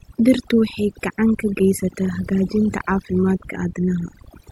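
Overdone noise removal runs through the whole recording. A noise reduction stage was pushed far too hard, so every frequency band that sat close to its noise estimate was driven down or shut off entirely. The softer parts of the speech fell below that threshold and were removed along with the noise. What remains is a lowered background flecked with twinkling specks.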